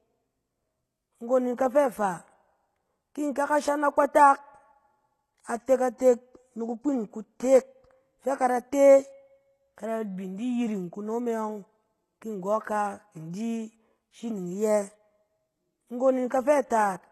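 From start to finish, the speech carries HE-AAC compression damage that is plainly audible, likely from encoding at a very low bitrate on the order of 16 kbps. Sibilants sound gritty and metallic, with a lispy edge, because the upper band is synthesised by copying lower bands upward rather than coded directly. On a spectrogram, the treble appears as repeated, smeared blocks whose harmonics fail to continue the lower ones, stopping abruptly at 12.3 kHz.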